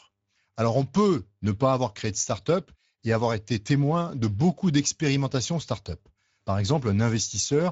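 From start to finish the speech sounds hoarse and grainy, with a noisy edge, and nothing sits above about 7.7 kHz. This is Speex codec damage: the damage level fits a bitrate near 17 kbps, leaving the CELP coder too few bits for the excitation.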